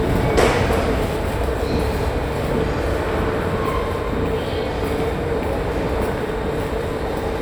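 Everyday sounds, with no technical faults audible anywhere.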